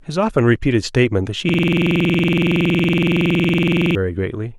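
At 1.49 s a system hang loop begins: the computer or its audio driver stopped delivering new data, but the sound hardware kept replaying the same stretch of its ring buffer. Until 3.95 s, one 46 ms fragment of the speech repeats exactly, about fifty times, which fits a 2048-sample buffer. At a 21.5 Hz repeat rate the sound becomes a coarse, rattling buzz, a rapid mechanical stutter in place of the speech, until normal audio returns.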